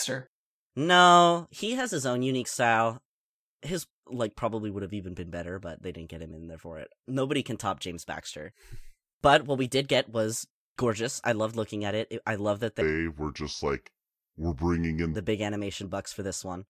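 From 12.81 to 15.15 s the speech drops into a wrong sample rate fault: it plays at about 0.73 times speed and about 5.5 semitones lower, which fits 44.1 kHz audio played at 32 kHz. Unlike a pitch shift or time-stretch, tempo and pitch fall together.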